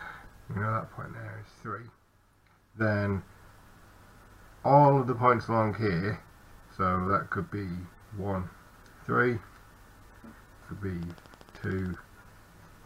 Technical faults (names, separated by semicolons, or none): train of clicks